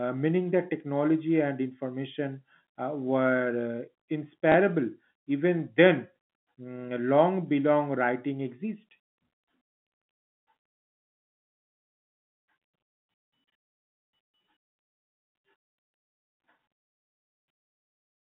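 Packet loss with last packet repeated at 4.52 s: one 20 ms packet went missing and the preceding one was replayed, leaving a small blip in the speech.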